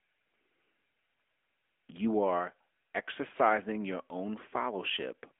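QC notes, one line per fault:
Throughout: AMR narrowband mobile codec. The speech is confined to a telephone band of roughly 300 Hz to 3.4 kHz, with nothing above 3.5 kHz, so sibilants and breath lose their edge and low body thins out. The codec rebuilds each 20 ms frame from a vocal-tract filter and sparse pulse excitation. The plainly audible buzzy, synthetic texture points to a mid-range mode around 10.2 kbps.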